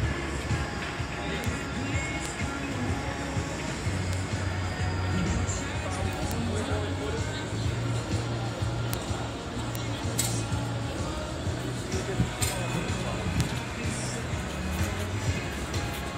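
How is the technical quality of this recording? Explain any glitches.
The recording has seven isolated clicks. Bit error spikes occur at 1.44, 2.26, 4.13, 6.31, 8.94, 9.75 and 13.41 s. A flipped bit makes one to three samples jump by a power of two and return, peaking at about −13, −7 or even −1 dBFS, heard as sharp, broadband ticks unrelated to the sound.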